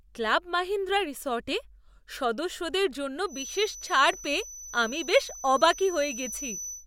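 A speech clip with a feedback whistle entering at 3.25 s, right after "সদস্যদের জন্য", and continuing to the end at 6.86 s. A thin, steady tone at 6 kHz sits roughly 15 dB below the speech, swelling and fading slowly in level. The likely cause is a loudspeaker-to-microphone loop held just at the edge of feedback. On a spectrogram it shows as a single bright horizontal line at 6 kHz from 3.25 s onward, and in the waveform as a low fill between words.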